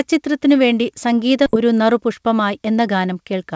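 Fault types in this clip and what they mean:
Skip ahead: at 1.46 s roughly 0.7 s of the speech is dropped with no fill, and playback jumps straight across the hole. This is the kind of loss a jitter buffer causes when it discards queued audio after overflowing, cutting its delay by about the same amount.
Jitter buffer speed-up: from 1.55 s to 3.41 s the speech runs at 107 percent speed with its pitch unchanged. The buffer trims many tiny pitch-period slices, roughly 150 ms in total, to shrink its backlog, so the talking sounds slightly rushed.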